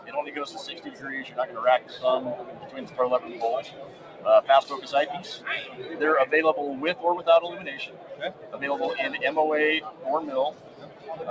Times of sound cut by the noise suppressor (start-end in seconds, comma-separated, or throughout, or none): 0.76-1.04, 1.29-1.97, 2.42-2.98, 3.65-4.25, 7.87-8.58, 9.87-10.03, 10.52-11.09